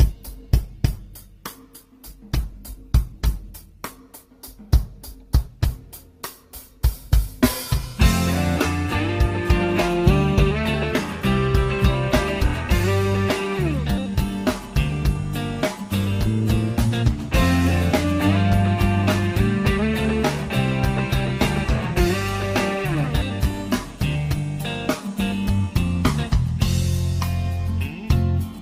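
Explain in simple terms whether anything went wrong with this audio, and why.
Yes. This is an adaptive stream starting at a low bitrate. Until 4.0 s the audio sounds dull and smeared, then it suddenly becomes clearer without any gap.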